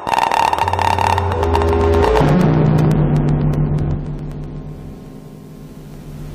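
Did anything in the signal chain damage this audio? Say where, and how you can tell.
Yes. At the driver or buffer stage there are periodic USB or driver dropouts: tiny gaps, roughly 2 ms each, that go silent every 0.125 s from 0.09 s to 6.19 s. That's an even ticking, about seventy of them, from something stalling the driver on a fixed schedule.

Separately, the codec stage shows damaged data in a compressed stream: short glitches at 0.62 s, 2.20 s and 3.94 s. Those are spots where corrupted bytes made the decoder misread frames and lose sync until it found the next valid header.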